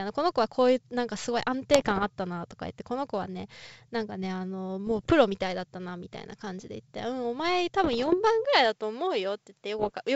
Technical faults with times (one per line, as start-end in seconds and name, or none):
1.74-2.09 bit errors on an ADPCM link
4.86-5.13 bit errors on an ADPCM link
7.84-8.15 bit errors on an ADPCM link
8.45-10.16 input switched to a poorer device
9.79-9.97 bit errors on an ADPCM link